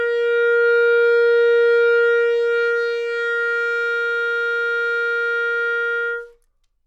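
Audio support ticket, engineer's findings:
Listened through the whole clip and found nothing to flag, so no findings to log on this one.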